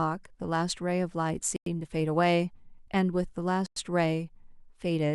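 Twice the speech drops into dead silence with abrupt edges, first from 1.56 to 1.66 s and again from 3.66 to 3.76 s, each hole lasting 100 ms. Nothing is missing on either side; the sound simply halts and resumes. This is a gap between chunks. The audio was delivered in 2.0 s pieces, and a pause was inserted at each join, so the interruptions fall at that regular spacing.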